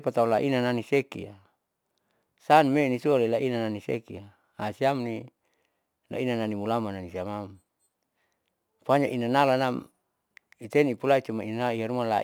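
Throughout the clip there is crude rate conversion: samples were repeated or dropped to change rate, likely from 44.1 kHz to 48 kHz, with no smoothing filter. The resulting error sits about 30 dB below the speech, a gritty, inharmonic fizz tracking louder and brighter syllables.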